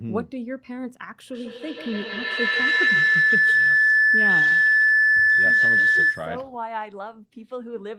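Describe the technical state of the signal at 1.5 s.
At 1.5 s a feedback howl is building, lasting from 1.29 to 6.47 s: a nearby loudspeaker on the same call loops back into the microphone, gaining level each trip. It narrows to a tone near 2 kHz, with repeats roughly every 150 ms, peaking about 11 dB above the speech.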